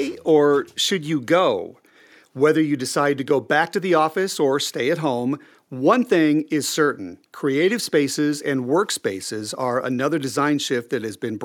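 No technical faults can be heard anywhere in the recording, and the signal holds steady throughout.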